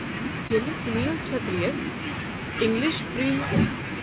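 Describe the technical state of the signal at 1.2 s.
Clock drift between sender and receiver is present at 1.2 s, as it is from start to end of the clip. The sender's clock runs roughly 2 percent slow, so the receiving jitter buffer keeps draining; to cover the shortfall it stretches the speech by repeating short pieces. These small timing hiccups recur at uneven intervals, heard over narrowband audio with nothing above 4 kHz, as expected from a G.711 A-law call path.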